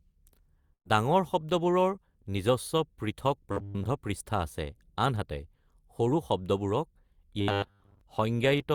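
At 0.73 s the sound is replaced by a held, smeared continuation of what came just before, which sags in level and dies away toward quiet before the audio picks up again at 0.87 s, slightly further along than where it broke off. This is a burst of packet loss: about 120 ms of audio never arrived in time, and the receiver covered the hole by extending and fading the last sound it had rather than playing the missing stretch.

From 3.52 to 3.87 s, and again from 7.41 to 8.01 s, the sound hardens into a stiff, metallic buzz locked at 100 Hz. It still loosely tracks the rise and fall of the speech. This is robotic sound from repeated short buffers. The likely cause is fresh audio arriving too rarely, so the playback looped the most recent 10 ms slice, one period of that 100 Hz buzz, for most of each stretch while the real audio in between was dropped.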